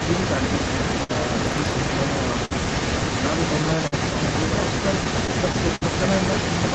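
From the start to the end at about 6.7 s, a second copy of the speech trails the original by about 315 ms, only a few decibels quieter. This is echo leak. The likely cause is a loudspeaker on the far end whose echo canceller let part of its microphone pickup through and sent it back. On a spectrogram, each syllable's harmonic pattern reappears a third of a second later, slightly weaker. In the waveform, the gaps between phrases fill with this delayed energy instead of falling quiet.

Running through the whole clip is clock drift between sender and receiver. The sender's clock runs a few percent slow, so the jitter buffer keeps draining, and the receiver periodically runs short of audio and has to pad. This causes the recurring timing hiccups. At 1.03 s, 2.45 s and 3.87 s, each is a short stall from a late packet. The last sound is held for 58 ms, 54 ms and 48 ms respectively before playback resumes, with nothing lost. 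Each one is heard as a brief sustained tone with a slight buzz or dip. On a spectrogram, the harmonics run flat and unchanging for those tens of milliseconds. In the waveform, a short stretch of near-identical repeating cycles appears.

From 5.04 s to 5.83 s, the stalls bunch into repeated stalls (stutter). Four gaps are padded, adding 93 ms in total, and the longest is 60 ms. About an eighth of that stretch is stretched-out sound. Speech here drags and catches, with the longer fills fading slightly. A spectrogram shows several short frozen harmonic patches in quick succession. The waveform shows repeated periodic segments, some tapering in level.

The whole clip is band-limited with nothing above 8 kHz, as expected from the call path.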